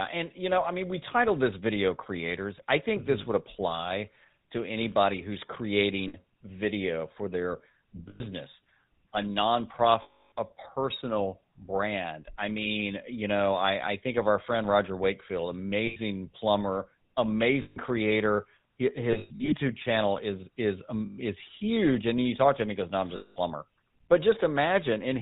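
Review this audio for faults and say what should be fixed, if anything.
GSM full-rate codec, throughout the clip: the speech has the buzzy, gravelly roughness of the original GSM coder, which fits a 13 kbps full-rate coder. It models the vocal tract as a filter and excites it with a regular pulse train that keeps only every third excitation sample, so fine voicing detail is lost, and nothing above 4 kHz survives, leaving the speech narrow and dull. The damage is plainly audible. To prevent it, use a wideband or modern codec such as AMR-WB or Opus instead of GSM full rate.

Lost GSM frames at 6.08 s (60 ms, just before "video for their"), 8.08 s (120 ms), 10.02 s (300 ms, just before "a personal brand I"), 15.86 s (100 ms), 17.62 s (140 ms), 19.12 to 19.54 s (about 260 ms of losses scattered over 400 ms, the longest run roughly 100 ms), 21.06 s (120 ms, between "channel is is" and "is huge") and 23.16 s (200 ms). 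At each gap the decoder repeats the last good frame's parameters, so the sound freezes into a rough, metallic ring. In the 300 ms loss at 10.02 s that ring lasts longest. To prevent it, carry the stream over a cleaner link with error protection or jitter buffering so that frames arrive intact.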